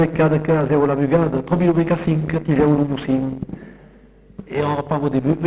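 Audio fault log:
No faults are logged; the signal came through a WebRTC call path with nothing above 4 kHz, a narrowband limit that fits G.711 mu-law at 64 kbps.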